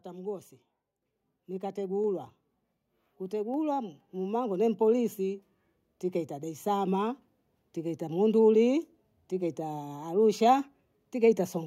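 A speech recording with one fault: the microphone volume stepped up at 1.02 s, where the level jumps by about 6 dB in a single instant and stays there. The likely cause is call software judging the input too quiet and raising the device's input volume in one step. Unlike a talker leaning closer or a gradual gain ramp, the background noise rises by the same amount as the speech, and the change is abrupt rather than smooth.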